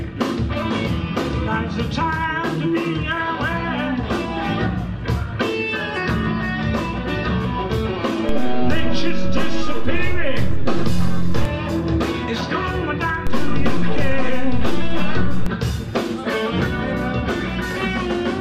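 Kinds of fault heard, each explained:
DC step: the waveform's zero line suddenly jumps to an offset and sits there, so you get a low thump at 8.29 s with the offset lasting until 11.45 s, then the same from 13.27 s to 15.46 s, with the sound carrying straight through.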